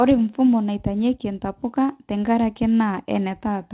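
No faults are audible in the speech, which passes over a call path whose band stops at 4 kHz, consistent with a narrowband telephone codec such as G.711.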